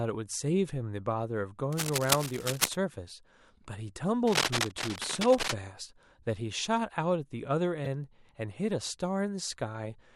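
From 1.72 to 2.76 s, and again from 4.26 to 5.54 s, dense, uneven scratching and rustling sits over the speech at roughly the same loudness as the speech itself. This is cable scratch noise, likely from a worn cable, connector or control being moved so that its contact resistance changes rapidly. Unlike a codec fault, the bursts are irregular and last about a second each, without any skip in the speech.

At 7.85 to 7.87 s, a short glitch of about 24 ms points to damaged data in a compressed stream. Corrupted bytes made the decoder misread the frames there and lose sync until it found the next frame header. The fault is set apart from the scratching by its brevity and by being the decoder garbling material rather than added noise.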